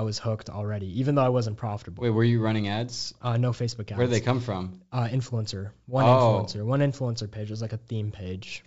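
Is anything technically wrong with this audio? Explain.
No, nothing is technically wrong with this speech: it comes through G.722 wideband telephone coding at 64 kbit/s, with the band up to 7 kHz intact and any coding trace faint at most.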